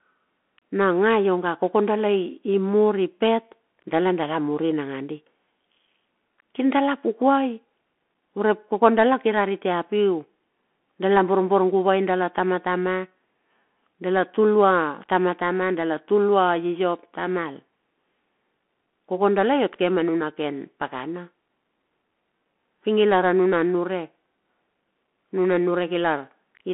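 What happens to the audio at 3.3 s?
At 3.3 s the speech is passing through a Bluetooth CVSD headset codec. The damage runs through the whole clip, not just this moment. CVSD encodes one bit per sample, telling the decoder only to step up or down. The step size adapts as it goes. Nothing above 3.8 kHz survives, so the voice sounds boxed into a telephone band of roughly 200 Hz to 3.4 kHz. Sibilants turn scratchy. A granular hiss sits under the speech.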